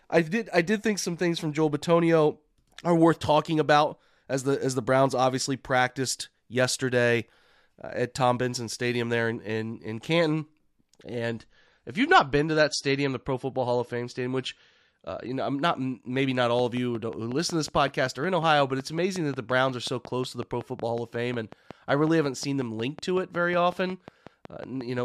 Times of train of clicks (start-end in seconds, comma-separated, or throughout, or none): 16.59-25.00